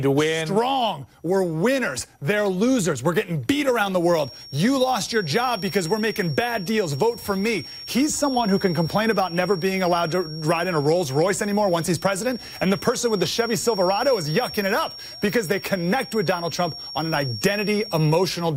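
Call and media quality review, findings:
Feedback whistle, 3.97 s to end of clip. Likely cause: acoustic loop from loudspeaker back into microphone, gain held right at the feedback point, so a single frequency recirculates without running away. Symptom: thin steady tone at 5.5 kHz sitting about 15 dB under the main sound, level swelling and fading slowly, never building or clearing.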